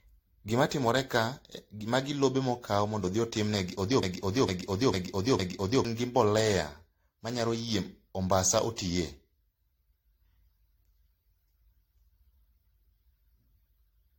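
Throughout, generation loss makes the speech swirly, hollow and smeared, with soft attacks, likely from several AAC passes near 64 kbit/s; the spectrogram shows nothing above 16.6 kHz.

From 4.03 to 5.85 s, a broken-record loop repeats one 0.45 s fragment four times, likely from a stalled stream, and the waveform shows identical blocks replacing lost audio.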